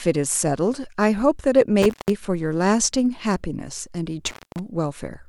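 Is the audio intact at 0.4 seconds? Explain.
Yes, at 0.4 seconds the audio is intact, with no dropout, click, distortion or other fault to be heard at that moment.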